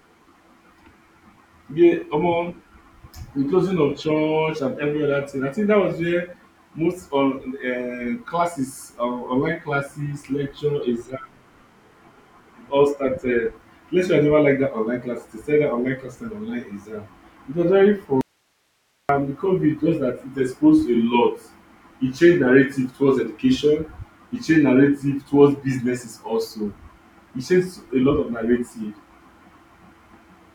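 At 18.21 s, just after "was very", the speech drops out abruptly for about 0.88 s, until 19.09 s. This is an audio dropout to a faint residue. Only hiss remains in the gap, roughly 45 dB below the speech. That points to a live path that likely lost its signal feed briefly.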